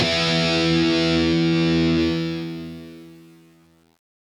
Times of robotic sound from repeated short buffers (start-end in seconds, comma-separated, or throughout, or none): none